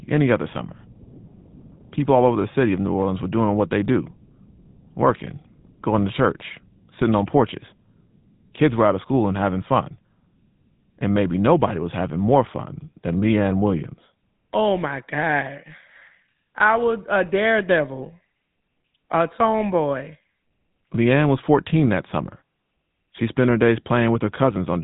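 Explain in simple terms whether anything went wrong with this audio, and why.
The speech has passed through the GSM full-rate codec for its whole length. This early phone codec rebuilds the voice from a simplified model driven by coarse pulses, giving a plainly audible buzzy, gravelly roughness, and it removes everything above 3.8 kHz, so the speech sounds muffled.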